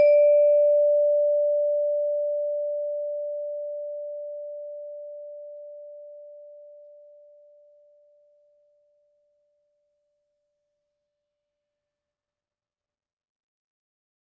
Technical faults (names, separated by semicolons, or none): none